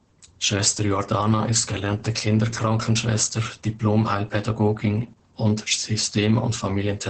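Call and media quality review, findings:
Muffled, hoarse, faintly robotic speech for the whole clip, nothing above 8.6 kHz. Opus voice compression at heavy damage: SILK linear-prediction coding at wideband, excitation quantised coarsely. The sound fits a bitrate around 10 kbps with 20 ms frames.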